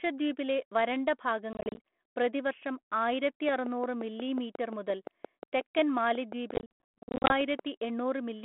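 This telephone speech, carried as 32 kbit/s G.726 ADPCM in a 200 Hz to 3.4 kHz band with only light coding grain, suffers packet loss on an ADPCM call twice. Packets dropped and were filled with silence, leaving the decoder's adaptive predictor and step size out of step with the sender's. From 1.53 to 1.78 s about 130 ms goes missing in short holes spread over 240 ms, the longest 30 ms, which points to around fifteen lost packets. From 6.54 to 7.32 s about 530 ms vanishes across 760 ms, with one hole of 100 ms, suggesting roughly fifty packets. Each hard-edged gap is followed by speech returning slightly distorted before it settles. Overlapping the second loss, a train of clicks runs from 3.49 to 7.60 s: some twenty near-identical pulses arrive at a regular 5.6 per second, peaking around 10 dB above the speech. They tick through pauses as well as over the speech, likely from electrical interference or a struggling interface injecting pulses into the signal path.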